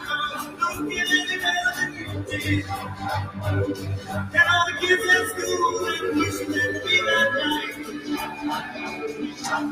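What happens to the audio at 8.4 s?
Around 8.4 s you're hearing the sound cut by the noise suppressor. From 8.26 to 8.44 s, roughly a fifth of a second, the suppressor decides what's playing is noise and pulls it down harder than its surroundings, by about 6 dB at the deepest point. Whatever is sustaining or fading there sinks and loses its tail, so the moment sounds briefly hollowed out before the level comes back.

That dip sits on top of a wider problem: a noise suppressor built for speech is left running on material it wasn't meant for. Across the clip it keeps mistaking steady tones, ambience and reverb for noise and turning them down, with the gain swinging by around 10 dB. Sudden onsets mostly get through while held sounds and decays get squeezed, so at 8.4 s the drop lands in audio that's already pumping, fluttering or thinning out.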